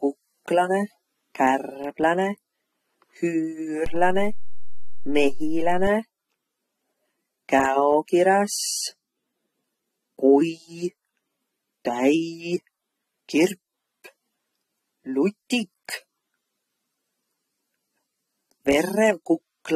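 A speech recording that was most likely first squeezed through a low-bitrate codec and then re-saved as a high-bitrate MP3, which cannot restore what the first pass discarded: nothing is present above 13.8 kHz, and the dull top end points to low-bitrate audio saved at a high bitrate. At 3.86 s the waveform's zero line jumps to a new offset, a DC step, heard as a low thump, and the offset lasts until 5.87 s while the speech runs on unchanged.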